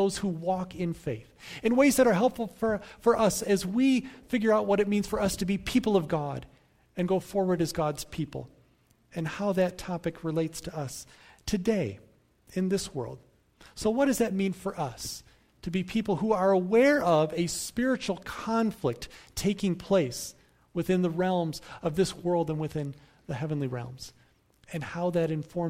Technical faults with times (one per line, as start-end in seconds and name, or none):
none